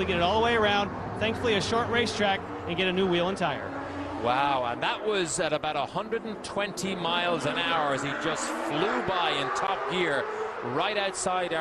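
At 9.67 s, running to about 9.70 s, there is a corrupt frame decoded. The damage spans roughly three compressed frames. Bits in those frames were flipped, but the decoder played them anyway. Misread codes and wrong gains put energy at the wrong frequencies. The result is a brief chirp or burst of noise lasting about 30 ms. The error energy reaches around -15 dBFS.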